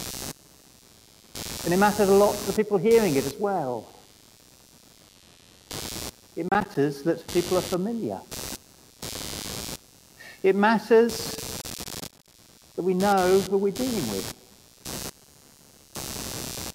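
A buzz runs under the audio from start to finish. It is computer activity noise. It pulses at around 100 Hz and sits roughly 15 dB below the wanted sound. Its rise and fall follows the computer's workload, not the audio. Processor, graphics or mouse activity is disturbing the shared ground, and that leaks into the audio circuit. Processor overload crackle breaks in twice. The first burst runs from 6.49 to 6.75 s. The second, longer one runs from 11.62 to 12.34 s. Each is a gritty tearing made of many tiny dropouts to silence with hard edges. The spacing of the gaps fits buffers of about 10 ms. The processor could not fill these buffers in time, missing many in a row. The second burst suggests several dozen missed deadlines. Both bursts stop once the load eases.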